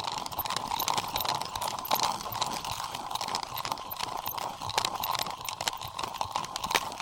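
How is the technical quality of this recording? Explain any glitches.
Poor: the whole recording is affected by one format fault. Audio read two samples at a time (double speed) runs throughout, playing everything twice as fast and 12 semitones (an octave) high. Pairs of samples are consumed as single frames.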